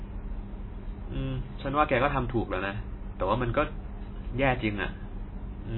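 Throughout the speech, nothing reaches above 4 kHz, and what remains warbles and swirls, with s sounds turned metallic and attacks smeared. This is likely heavy MP3 compression at a very low bitrate, near 18 kbps, which leaves too few bits for weak frequency lines, so they flicker between frames. That flicker is what separates it from a plain low-pass filter, which would only dull the sound.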